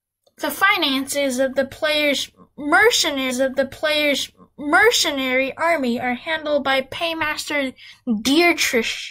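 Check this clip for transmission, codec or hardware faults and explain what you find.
A stream segment repeated between 3.26 and 5.27 s. The player fetched or queued the same stretch of the stream twice, so a block of about 2.0 s of speech plays a second time. That adds about 2 s to the running time. At the jump back there is a small blip where the playback splices onto the earlier material, and the duplicated passage ends just before "army are handled by".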